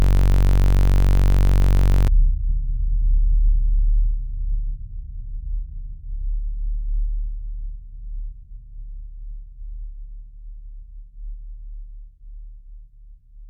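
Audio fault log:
0.00–2.08 s, system hang loop: already under way when the clip begins, a 21.33 ms piece of audio repeats exactly, about a hundred times, which fits a 1024-sample ring buffer cycling during a freeze. It is heard as a steady 46.9 Hz buzz.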